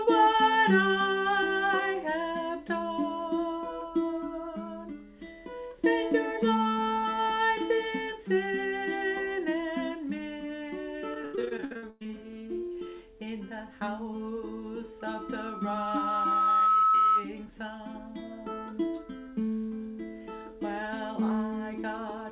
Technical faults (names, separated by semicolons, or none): repeated packet loss (robotic sound); loudspeaker feedback squeal